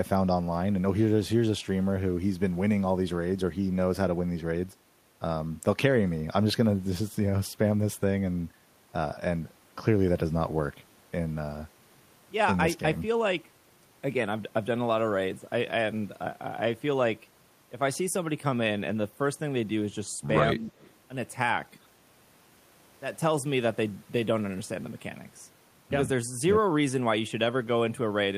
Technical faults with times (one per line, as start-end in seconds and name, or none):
20.51-20.73 speech suppressed in double talk
20.70-20.91 echo leak